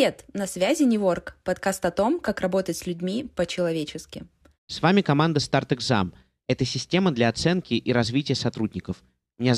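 No technical faults are audible.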